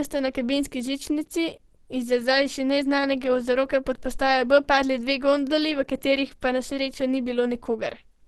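Opus compression runs throughout the speech, likely at a rate around 16 kbps. The muffled, hoarse character points to the encoder having switched to its hybrid speech mode. Nothing is present above 12.1 kHz, and the codec damage is plainly audible across the whole clip.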